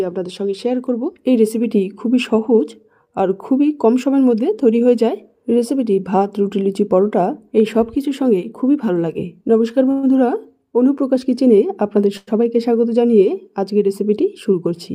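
At 9.91 to 10.05 s and again at 12.17 to 12.29 s, the sound stalls into a brief fading buzz of about 118 ms and 102 ms, then resumes where it stopped. This call audio freeze is likely delayed packets draining the jitter buffer, adding a gap without losing audio.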